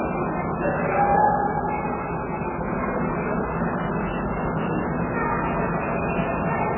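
A recording of everyday sound, dull and watery from start to finish, with nothing above 3 kHz and weak detail swirling in and out as it goes. The likely cause is heavy MP3 compression, whose encoder cut the treble and dropped quiet frequency lines, which fits a very low bitrate of around 8 kbps.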